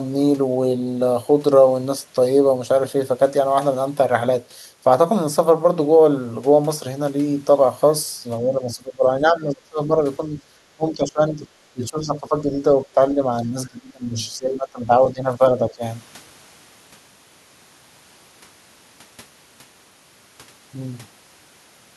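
From 8.43 to 15.83 s (8.43, 10.18, 10.76, 11.73, 14.38 and 15.07 s), the speech dips by roughly 15 to 25 dB, likely speech suppressed in double talk by an echo canceller, showing as sagging, thinned waveform envelope and faded spectrogram bands.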